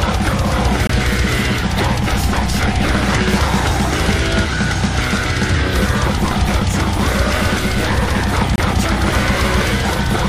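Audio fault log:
0.87–0.90 s and 8.56–8.59 s: corrupt frame muted, an abrupt silent hole lasting one frame (about 32–36 ms) where a damaged frame was rejected and replaced by silence. Unlike a dropout that loses time, the timing is kept.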